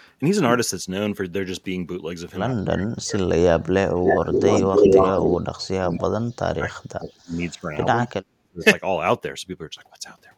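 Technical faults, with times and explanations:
2.55–7.86 s and 8.06–8.63 s, speech suppressed in double talk: the speech repeatedly dips and breaks up, at its deepest falling around 40 dB, close to silence, for about four seconds in the first span and half a second in the second. The likely cause is both ends talking at once: the echo canceller could not tell this talker apart from the loudspeaker echo, so it pushed down everything its microphone sent.
4.08–4.15 s and 4.31–5.36 s, echo leak: a copy of the speech trails the original by 262 ms, first as a brief scrap roughly as loud as the speech, then for about a second somewhat louder than it, doubling and smearing the sound. This is likely a far end using a loudspeaker whose echo canceller left part of what its microphone picked up in the signal, so it was sent straight back.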